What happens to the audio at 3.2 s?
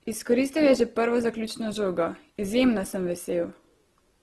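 At 3.2 s the speech sounds grainy and rough, with nothing above about 12.2 kHz, as throughout the clip: likely Opus compression, its music mode filling starved bands with noise at a rate around 16 kbps.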